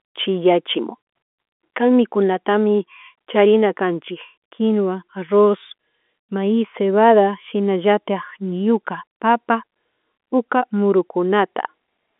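Nothing technically wrong can be heard in this speech recording. It carries the narrow sound of G.711 telephone coding, with the line band running from about 250 Hz to 3.5 kHz and nothing present above 3.7 kHz.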